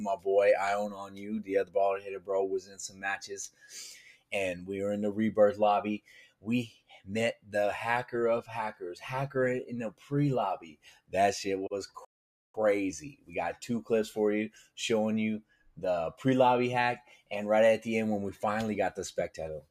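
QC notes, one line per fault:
Throughout: noise suppressor applied to music or sounds. A suppressor built for speech stays engaged across the whole clip and treats sustained, steady parts of the sound as noise to be removed. Its gain rises and falls by roughly 10 dB as it decides what to keep, so sharp onsets pass while held material and decays are pulled down. The result is an audible pumping and fluttering, with the body of the sound thinning between attacks.
0.00–0.26 s, 0.88–4.69 s, 5.99–7.54 s, 9.91–11.14 s, 13.07–13.63 s, 14.55–14.77 s, 15.41–15.78 s, 17.01–17.31 s: sound cut by the noise suppressor. In each span the suppressor judged part of the sound to be noise and ducked it harder than its surroundings, by about 16 to 17 dB at the deepest. The longest run, 0.88–4.69 s, loses around two seconds in total. Sustained and fading parts sink or have their tails clipped short, while abrupt events mostly survive.
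12.05–12.55 s: playback stall. The output drops to silence for about 0.49 s in mid-flow, then resumes. A gap this long is likely the player starving for data or its audio thread being blocked, leaving nothing to send to the output until it caught up. The break is clearly audible as a hard stop rather than a fade.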